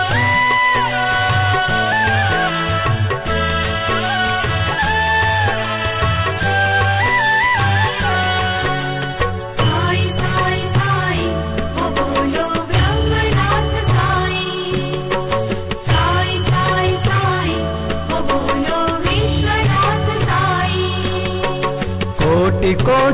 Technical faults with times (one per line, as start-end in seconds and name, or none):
none